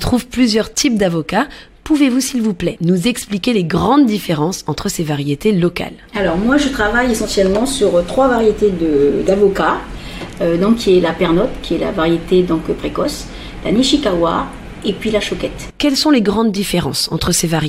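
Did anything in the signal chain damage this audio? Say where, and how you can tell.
No, nothing in this audio stood out on listening as a sign of damage from any stage of the signal chain.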